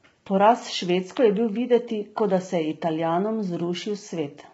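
Throughout the speech, the voice sounds rough and grainy, with noise filling the gaps between harmonics and nothing above 7.7 kHz, likely from low-delay AAC compression at a rate that fits about 16 kbps. Unlike long-frame AAC's swirling, the short frames blur pitch structure into steady grit.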